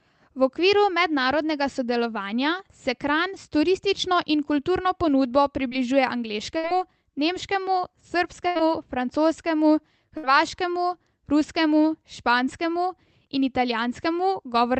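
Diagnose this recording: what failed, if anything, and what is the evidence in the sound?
The network stage failed. There is a short concealed packet loss at 5.67 to 5.73 s. About 40 ms of speech never arrived in time. The decoder extended the preceding sound to fill it. It is heard as a brief smear before the real audio returns.

The network also caused bursts of packet loss at 6.57 to 6.65 s, 8.47 to 8.57 s and 10.17 to 10.25 s. They removed about 60, 80 and 60 ms. In each gap the receiver continued the last sound and faded it. The speech then resumes further on. The call codec's band limit near 8 kHz, which suggests Opus at about 24 kbps, can be heard throughout.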